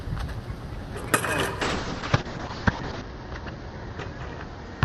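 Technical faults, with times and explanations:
1.62–4.84 s, call bitrate drop: starved of bits, the encoder codes coarsely and removes content above 8 kHz, leaving the sound watery and muffled, worst for 1.4 s.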